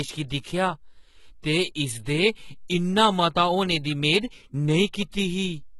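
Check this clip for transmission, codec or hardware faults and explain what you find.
Two faults show up: low-bitrate codec damage across the whole speech clip, and one pre-echo.

Throughout, the treble has been rebuilt rather than transmitted, which points to HE-AAC compression, likely at a very low bitrate around 16 kbps. The encoder kept only the lower spectrum and synthesised the top by copying lower bands upward under a rough envelope. The damage is heavy: sibilants turn gritty and metallic, the upper harmonics don't line up with the lower ones, and nothing is present above 11.8 kHz.

From 1.42 to 1.44 s there is pre-echo. A sharp onset landed late in a transform block, and the quantisation noise the codec sized for that loud moment was spread back across the quiet stretch before it, about 21 ms in all. The result is a brief smear of hiss just ahead of the attack, which itself sounds blunted and less crisp.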